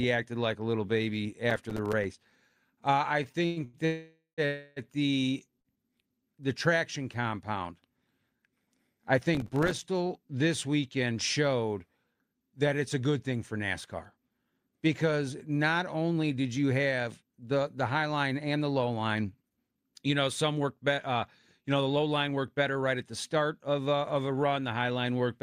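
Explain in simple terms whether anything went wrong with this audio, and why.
Right after "like a little baby", from 1.50 to 2.31 s, and again at 9.35 to 9.85 s, there's processor overload crackle: the machine kept missing its tiny few-millisecond audio deadlines, leaving dozens of silent ticks.

From 3.23 to 3.76 s there's a stutter, or repeated stalls. Packets kept arriving late, so the sound was held four times, the longest about 0.1 s, and dragged.

Two call audio freezes follow, at 3.85 to 4.41 s (partly silent) and 4.46 to 4.79 s. The sound hangs, then carries on, likely because packets were stuck in transit.

At 5.60 s a short stall from a late packet stretches one sound by about 50 ms before things resume.

After "because not", from 16.08 to 21.20 s and again at 21.61 to 25.07 s, jitter buffer speed-up trims tiny slices to catch up, so speech runs about 11 to 14% faster at the same pitch.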